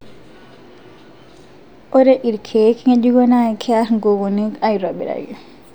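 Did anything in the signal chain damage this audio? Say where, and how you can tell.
No, nothing along the chain seems to have done any harm here; this speech recording comes across without any damage a listener could point to at any stage.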